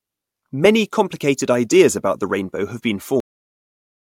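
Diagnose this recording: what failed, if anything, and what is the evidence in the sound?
The final buffers of the recording were never written to storage, producing a cut-off end. At 3.20 s, right after "the rainbow have been", the speech stops mid-sound and falls straight to digital silence with no natural decay, remaining silent through the end.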